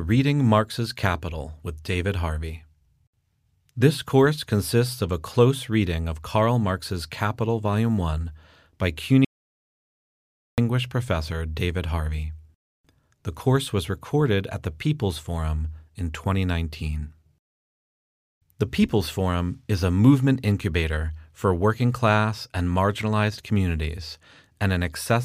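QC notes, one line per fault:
9.25–10.58 s: audio dropout to silence. The speech stops abruptly mid-flow and the signal falls to silence for about 1.33 s, with no room tone or background beneath it. It then resumes just as suddenly. Whatever was spoken in that span is simply missing. The likely cause is a lost input, such as a disconnected device, a failed link or an accidental mute, while the recorder kept writing zeros.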